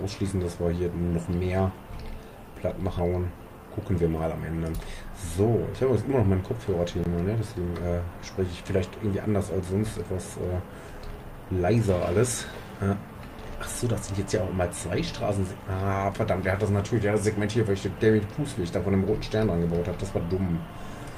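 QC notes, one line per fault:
2.99 s, skip ahead: about 0.4 s of audio vanishes and both sides join directly, with no silent gap as a dropout would leave, so the sound jumps forward.
3.59–4.21 s, jitter buffer speed-up: short pitch-period pieces are trimmed repeatedly, about 70 ms in total, so the audio runs about 8% fast at unchanged pitch, unlike a resampling error.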